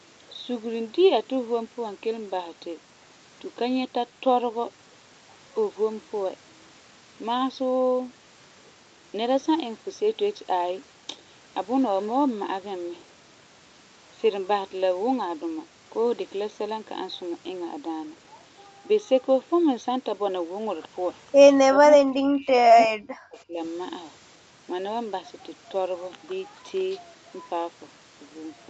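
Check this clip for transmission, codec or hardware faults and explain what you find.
One fault stands out: speech suppressed in double talk between 21.72 and 23.58 s, most likely caused by the echo canceller. When both ends talked at once, the canceller mistook the near talker for loudspeaker echo and ducked it, in pieces totalling about a second and a half and dipping by roughly 40 dB at worst. The waveform shows sudden envelope collapses, and the spectrogram shows patchy gaps and thinned upper bands. The empty region above 8 kHz fits a wideband Opus call path.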